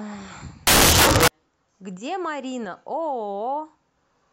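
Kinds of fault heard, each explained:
Samples built from the wrong bytes: the reader assembles each sample from its bytes incorrectly, through a one-byte offset, swapped byte order or a wrong alignment assumption, so the rapidly varying low-order bits end up carrying most of each value's weight. In this speech clip it appears from 0.67 to 1.28 s, roughly 0.6 s, as a burst of loud, harsh broadband noise.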